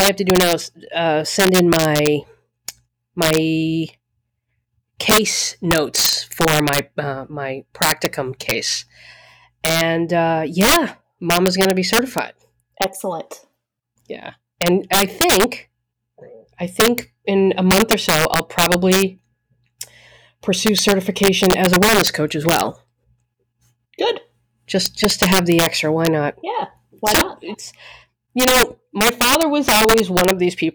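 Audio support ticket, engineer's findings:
Integer overflow throughout the speech: violent cracks on loud peaks, not flat-topped clipping. Gain about 8 dB over range; around one percent of samples wrap to opposite sign.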